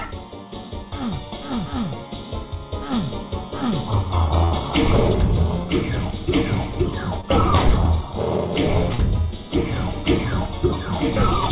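A burst of packet loss hits at 4.44 to 4.53 s. The receiver extends the last sound for about 70 ms and lets it fade, and then the audio jumps ahead with about 60 ms of the original gone. On a spectrogram this shows as a smeared, repeating stretch whose energy dims toward the gap's end, followed by an abrupt resumption. In the waveform the envelope tapers downward and then steps back up. Two short concealed packet losses follow, at 7.21 to 7.27 s and 8.94 to 9.00 s. About 20 ms and 40 ms of audio respectively never arrived in time, and the decoder synthesised a continuation of the preceding sound before crossfading back. Each is heard as a brief smear or wobble. A spectrogram shows a thin blurred column where harmonic or noise detail goes soft, and the waveform shows a slightly repeated, rounded segment. The call path runs through a narrowband codec that fits 64 kbps G.711, so nothing appears above 4 kHz.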